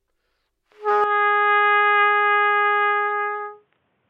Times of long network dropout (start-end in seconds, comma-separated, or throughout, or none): none